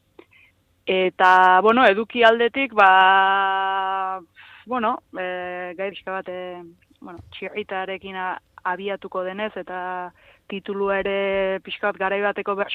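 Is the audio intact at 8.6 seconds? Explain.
Yes, at 8.6 seconds the audio plays through intact, with no dropout, glitch or other fault audible at that point.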